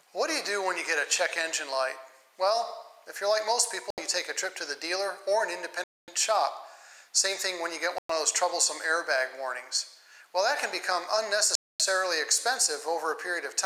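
The sound cuts abruptly to silence four times, at 3.90 s, 5.84 s, 7.98 s and 11.55 s, for about 75, 241, 111 and 245 ms, then resumes. These are likely Bluetooth stalls, where delayed wireless packets let the headphone buffer run dry.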